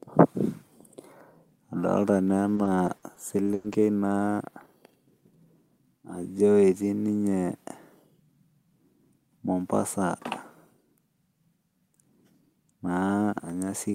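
From 2.55 to 3.74 s the speech breaks up with repeated packet loss, giving a robotic sound. Five gaps land in that stretch, the longest 100 ms, and each is bridged by stretching the last bit of sound. About 17% of the span ends up patched, so it comes across choppy.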